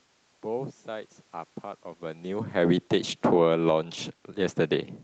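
From 2.34 to 3.64 s, automatic gain falling pulls the level down by about 9 dB, and the room noise sinks with the speech, unlike the talker moving around 2 s. Overlapping it, automatic gain rising from 3.55 to 4.11 s lifts speech and background together by about 5 dB, a gradual swell rather than a step.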